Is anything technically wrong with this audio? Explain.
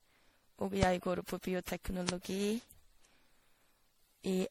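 Yes. Throughout, the speech has generation loss, most likely from being decoded and re-encoded around seven times with a lossy codec. The character points to MP3 at about 64 kbit/s. Each pass quantised on a shifted frame grid, so noise and spectral holes accumulated. The result is swirly, hollow, smeared speech with blurred consonant attacks, and nothing above 19.7 kHz.

There are two loud pops, at 0.83 to 0.85 s, just before "går på", and at 2.09 to 2.11 s. Each is a single brief voltage pulse, likely from a switch, static or driver glitch, added to the signal and shaped by the circuitry after it. Each sounds like a sharp click roughly 20 dB above the speech, which carries on underneath.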